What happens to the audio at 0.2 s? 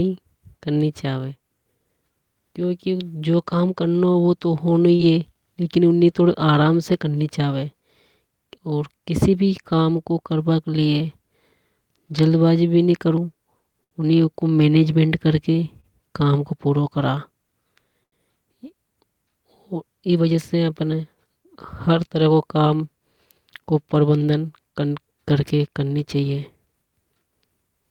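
Nothing goes wrong at 0.2 s; the speech there is intact, with no dropout, click, distortion or other fault at that moment.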